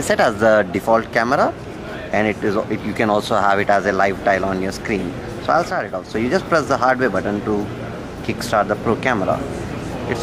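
The audio has a sudden drop of about 6 dB from 5.71 to 6.15 s, then recovers. That's likely one channel dropping out: with identical sound on both sides, losing one halves the mono sum, which matches the abrupt step with nothing else changed.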